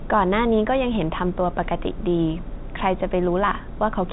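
Nothing goes wrong anywhere in this bit of speech; it's simply carried over G.711 telephone coding, so the sound stops at about 3.8 kHz, as phone audio does.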